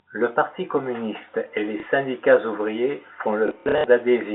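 At 1.8 s there's a small blip: packet loss with the last packet repeated. About 30 ms went missing and was filled by replaying audio, which suggests 30 ms packets. Between 3.48 and 3.84 s it returns as scattered repeats, with the longest buzzing run around 60 ms, all over the narrow telephone band of the G.711 line.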